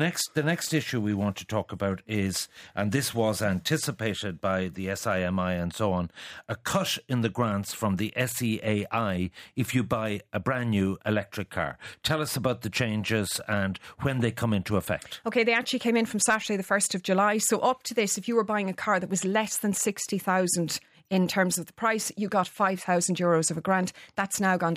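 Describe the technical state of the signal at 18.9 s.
At 18.9 s the signal is intact, with no audible fault at that moment.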